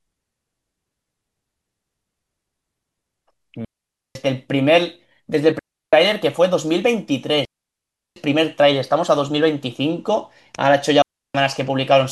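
A digital wireless link repeatedly lost too much data, and each time the receiver muted with a very short fade: digital wireless dropouts at 3.65 s (about 0.5 s), 5.59 s (0.34 s), 7.45 s (0.71 s) and 11.02 s (0.33 s), heard as clean holes of near silence in the speech with no noise burst either side.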